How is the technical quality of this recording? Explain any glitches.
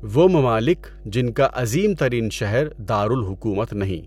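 The recording has one fault. Mains hum runs throughout: a ground loop or nearby transformer leaks the 50 Hz power line into the speech, sitting about 20 dB below it as a steady drone, drawn as a constant horizontal line at 50 Hz on a spectrogram.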